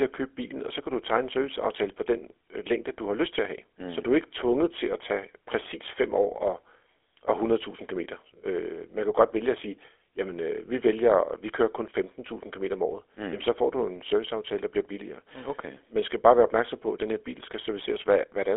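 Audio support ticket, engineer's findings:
GSM full-rate codec, 0 to end of clip. Buzzy, gravelly roughness on speech throughout; band-limited to a 300 Hz to 3.4 kHz line band, nothing above 3.7 kHz. Codec damage plainly audible, consistent with a 13 kbps full-rate stream. Cause: vocal-tract model driven by sparse, regularly spaced pulse excitation, giving coarse, rasping voicing.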